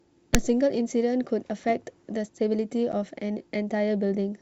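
At 0.34 s a phantom power thump lands: a supply being switched on a live input sends a voltage step through the coupling capacitors, and the preamp passes it on as a deep, blunt thud. It lasts to about 0.45 s, with the main energy dying away in roughly 24 ms. On a waveform it is a one-sided excursion with a quick exponential tail. On a spectrogram it is a dark smear confined to the lowest frequencies.

At 2.92 s comes packet loss on an ADPCM call, here over G.722 wideband coding, which points to its full 64 kbit/s mode and gives clean speech up to about 7 kHz. About one packet's worth, 10 ms, drops out and is filled with silence. The decoder's adaptive predictor and step size then disagree with the sender's, so the speech resumes slightly distorted before settling by 2.95 s. The waveform shows a flat-edged gap, and the spectrogram shows a blank vertical slot.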